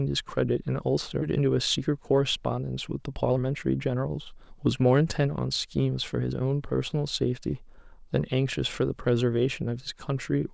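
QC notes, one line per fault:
1.22 to 1.24 s, skip ahead: playback jumps forward with no filler, so about a second of audio never plays. This stretch was dropped while later audio was already queued, and the two sides of the gap are spliced almost directly, giving an abrupt lurch.
1.40 to 6.42 s, jitter buffer speed-up: the audio runs about 9% fast at unchanged pitch and sounds hurried. The buffer had built up excess delay and shed it by cutting out many short pitch-period slices in succession, roughly half a second in total.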